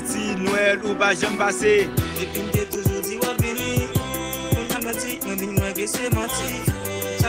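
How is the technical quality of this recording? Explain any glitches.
The recording has two kinds of glitch: one abrupt jump forward and three stretches where the sound hurries.

At 2.73 s there is a skip ahead. The sound lurches forward with no gap or fill, as if about a second had been cut out and the two edges spliced together. A run of audio was discarded, either lost in transit or thrown away when the jitter buffer overflowed while newer audio was already queued. Playback resumed directly on the later material.

Right after that jump, from 2.83 to 3.37 s, comes the first jitter buffer speed-up. The pace runs about 6% fast while the pitch stays the same, which is subtle but slightly rushed. The clearest case is 4.69 to 5.30 s, at 143% speed, which sounds plainly hurried and shaves off roughly a third of a second. A milder one, at 111%, follows from 6.77 to 7.07 s. In each case the buffer was holding more than its target delay, probably after late packets arrived in a bunch. 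To catch up, the receiver cut out many small slices, each one or a few pitch periods long. That shortens the timing without shifting pitch.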